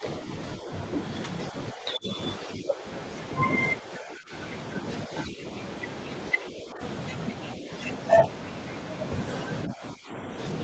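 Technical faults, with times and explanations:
0.00–0.04, 0.59–0.70, 1.51–2.84, 3.81–4.33, 5.07–5.44, 6.33–6.81, 7.57–7.70 and 9.67–10.15 s, speech suppressed in double talk: the speech repeatedly sinks and thins, with brief dips of around 5 dB and the deeper ones at about 15 dB, near 3.81 and 9.67 s. This is likely the echo canceller mistaking the talker for loudspeaker echo while the far end also spoke, and pulling the level down until it judged the echo gone.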